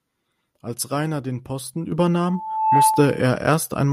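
At 1.92 s the microphone volume is stepped up by about 7 dB in a single jump: the input gain was raised in one step, so voice and background noise get louder together. At 2.25 s a loudspeaker feedback squeal begins, a single 872 Hz tone swelling over roughly half a second as the microphone re-captures the loudspeaker and the loop gain exceeds one at that frequency. It peaks somewhat above the speech level and stops at 3.23 s. While it sounds, at 2.94 s, the microphone volume steps up again, by about 3 dB, lifting the speech and the howl together.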